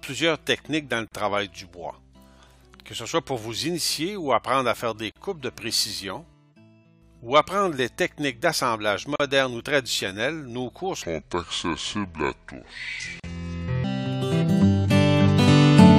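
Short dropouts of about 37 to 40 ms hit at 1.08, 5.12 and 9.16 s, one every 4 s. That's a gap at a join of encoded pieces: each chunk was encoded separately and stitched untrimmed, so encoder delay and end padding leave silence with smeared edges before the sound resumes. From 11.02 to 13.84 s there's a section at the wrong speed: playback runs at 0.653x, so everything drops roughly seven semitones and drags, likely from resampling against the wrong clock. The fourth join gap lands inside it at 13.2 s.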